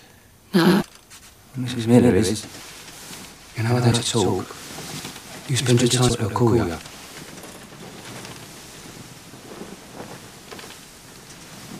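From start to finish there's a doubled audio track: a second, clean copy sits roughly a tenth of a second behind, around 5 dB down, with no room tail. Most likely a slower capture path got mixed in alongside the original.

Then the broken MP3 bit reservoir hits at 0.80–0.83 s, 2.91 s, 3.91–3.94 s, 6.08–6.11 s and 6.81–6.84 s: brief skips forward with a chirp, a burst of noise or a short hole, each lasting about 14 to 30 ms, around the length of one 26 ms frame. It's likely that dropped frames left the next ones pulling their data from the wrong bytes.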